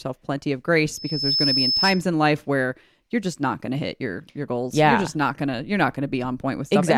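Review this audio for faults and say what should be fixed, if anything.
A loudspeaker feedback squeal runs from 0.92 to 2.06 s: the microphone re-captures its own loudspeaker, and at 5.2 kHz the loop gain tops unity, so a single tone swells over roughly 0.4 s to sit a few dB above the speech. On a spectrogram it is a bright horizontal line at 5.2 kHz, and the waveform envelope bulges outward as it builds. Prevent it by lowering monitor gain, moving the microphone out of the loudspeaker's coverage, or notching 5.2 kHz.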